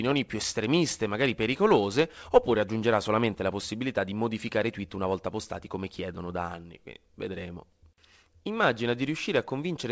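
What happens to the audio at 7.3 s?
Nothing goes wrong at 7.3 s: the speech carries on intact through that moment, with only the steady G.722 call-path band limit that leaves nothing above 8 kHz.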